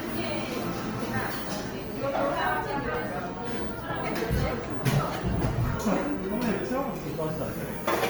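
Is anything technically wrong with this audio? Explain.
Yes. Throughout the audio, tonal parts sound rough, grainy and noisy rather than clean, while the spectrum stays full and extends to about 20.2 kHz without obvious holes or swirling. This is plainly audible Opus compression, likely in its music-oriented CELT mode at a low rate near 24 kbps. That mode preserves each band's energy but, lacking enough bits for the detail, fills bands with folded or noise-like content, which turns clean tones into grit.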